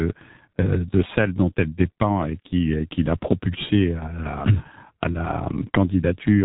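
Speech passed through the G.723.1 codec for its whole length, with heavy damage. Nothing survives above about 3.8 kHz, so it sounds muffled. The low bitrate, around 6.3 kbit/s, and long 30 ms frames smear consonants and give the voice a hoarse, rough texture.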